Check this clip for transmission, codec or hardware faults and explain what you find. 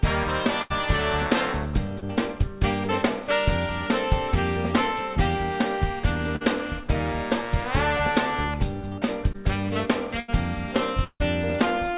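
The clip has three kinds of network fault: three bursts of packet loss, two short concealed packet losses and one long dropout. It all sits within a band that stops at 4 kHz, which fits a G.711 mu-law call path at 64 kbps.

Burst of packet loss, at 0.62–0.72 s, 6.36–6.43 s and 10.20–10.30 s. Several consecutive packets failed to arrive in time, so about 80 ms, 40 ms and 80 ms of real audio are gone. The receiver stretched the last sound and faded it, which you hear as a short held buzz or dimming hiss before the audio jumps ahead. On a spectrogram, flat repeated harmonic bands replace the moving detail. The waveform shows a periodic, decaying envelope.

Short concealed packet loss, at 2.00–2.04 s and 9.33–9.36 s. Each is about 20 ms that never reached the decoder in time. The receiver bridged it by continuing the preceding pitch or noise, then crossfaded back into the real signal. The result is a brief smear or wobble. 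On a spectrogram it appears as a thin smudged column where fine detail blurs. The waveform shows a small repeated cycle with a slight dip.

Long network dropout, at 11.04–11.22 s. The sound continues as a fading buzz or hiss for about 0.1 s, then there are about 60 ms of near silence before the audio resumes further on, with the intervening part lost. The cause is likely a stretch where no packets arrived at all. The spectrogram shows smeared sound dissolving into a dark gap, and the waveform shows a decaying repeated pattern ending in a flat line.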